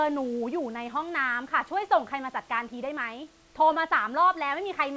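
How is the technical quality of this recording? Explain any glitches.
No glitches: the speech comes through a call codec with the band stopping at 8 kHz, as expected for a wideband call path, over a room noise floor about 33 dB below the speech.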